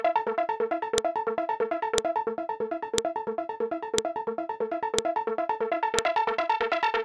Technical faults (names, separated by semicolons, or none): file header played as audio